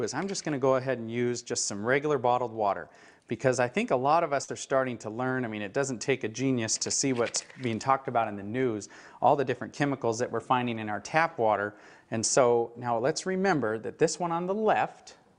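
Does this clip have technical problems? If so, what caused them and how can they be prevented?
Yes. Short concealed packet loss at 4.43 to 4.49 s: about 50 ms arrived too late, and the decoder filled 45 ms by extending the preceding sound, so it smears briefly rather than dropping to silence as a plain dropout would. A larger jitter buffer or forward error correction prevents this.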